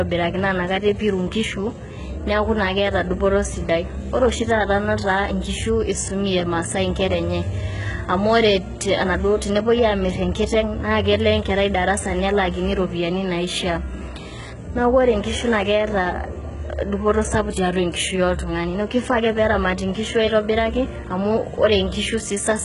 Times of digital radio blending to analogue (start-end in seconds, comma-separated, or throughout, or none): none